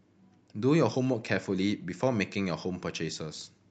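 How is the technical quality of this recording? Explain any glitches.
The technical quality of this recording is sound, with no glitches to explain.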